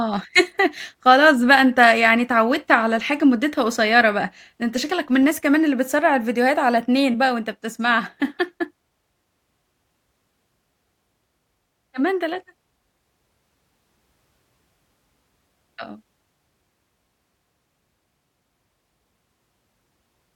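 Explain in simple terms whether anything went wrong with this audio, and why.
Nothing went wrong with it.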